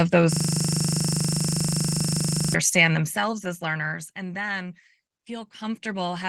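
A speech clip with a system hang loop from 0.33 to 2.54 s: a frozen 40 ms buffer repeats at 25 Hz, buzzing, showing as identical waveform blocks and evenly spaced vertical spectrogram stripes.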